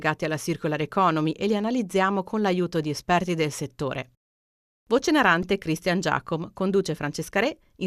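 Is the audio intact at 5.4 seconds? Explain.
No. At 5.43 s there is a repeated buffer: the playback device did not receive new audio in time, so it replayed the last block it held, about 1.45 ms long, four more times. Each repeat joins hard to the previous one, so instead of a stutter the sound is a brief click or buzz with a period of roughly 1.45 ms, which fits a 64-sample buffer. Essentially none of the speech is lost.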